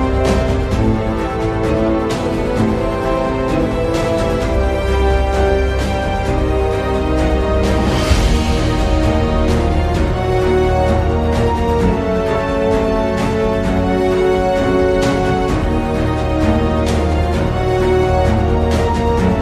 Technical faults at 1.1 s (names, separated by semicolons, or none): none